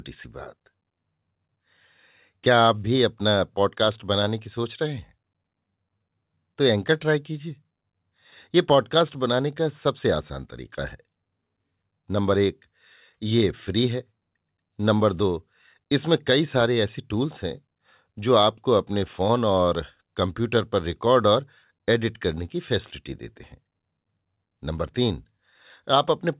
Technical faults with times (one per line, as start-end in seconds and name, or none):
none